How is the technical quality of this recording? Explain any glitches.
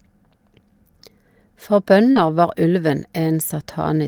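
The recording has one brief disturbance in the speech, where two related packet-loss faults overlap between about 2.11 and 2.17 s.

Short concealed packet loss runs from 2.11 to 2.17 s. The receiver filled about 40 ms by extending the preceding sound, so you hear a brief smear rather than the rougher texture that error correction leaves.

Lost packet rebuilt from error correction overlaps its end, from 2.15 to 2.17 s. One packet's 20 ms was decoded from a low-bitrate copy, giving a grainier moment instead of an extended, smeared one.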